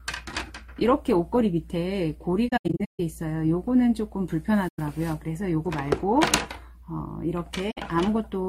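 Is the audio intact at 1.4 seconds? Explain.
Yes, at 1.4 seconds the audio plays through cleanly, with no dropout, click, distortion or other fault to be heard at that point.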